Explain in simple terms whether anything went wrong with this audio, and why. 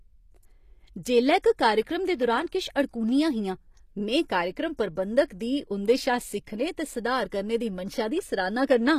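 Two things stand out. Throughout the speech, the treble sounds bright but not quite real: the s sounds come out gritty and a bit lispy, and nothing reaches above about 15 kHz. That's likely HE-AAC compression, which keeps the lower sound and rebuilds the top end by copying it upward.

There's also a pre-echo at 1.42 s, where a short hiss creeps in just ahead of a sharp attack and softens it. The codec spread its noise across a short chunk of sound, so some landed in the quiet moment before the attack.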